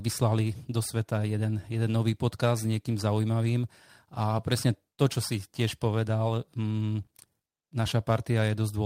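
Speech, with no audible faults.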